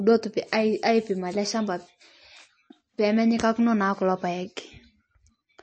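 From start to finish the speech sounds watery and swirly, with a plainly audible metallic chirp on s sounds and softened consonant onsets. Nothing is heard above about 8.3 kHz. This is likely MP3 compression at a low bitrate, which fits roughly 33 kbps. Short of bits, the encoder drops everything past a fixed treble limit and zeroes quiet frequency lines that then flicker on and off between frames, producing that swirling texture.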